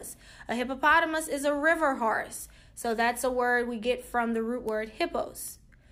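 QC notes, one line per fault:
4.69 s and 5.48 s: bit error spike. Each is a single sharp tick, peaking at about -18 dBFS and then about -24 dBFS, full-band and unrelated to the surrounding sound. One flipped bit threw a single sample off by a power of two before the signal snapped straight back.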